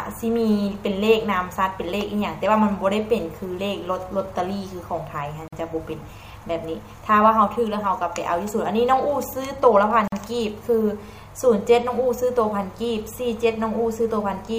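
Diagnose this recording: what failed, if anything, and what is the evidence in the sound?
Gap at a join of encoded pieces, at 5.48 s and 10.08 s: codec-stage silences of about 46 and 47 ms, left by untrimmed encoder delay and end padding.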